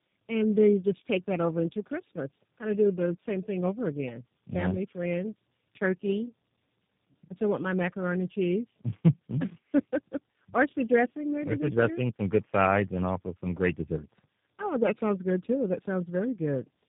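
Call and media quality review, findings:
Tandem speech coding throughout: rough, muffled, warbly speech, nothing above 3.7 kHz. Fits about three successive speech codecs, low-rate G.729A-type, each re-encoding prior damage. Spectrogram: smeared formants, hard band edge.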